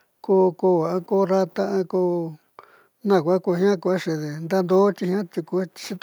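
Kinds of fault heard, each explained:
No technical fault can be heard anywhere in the recording. There is nothing to list under any kind.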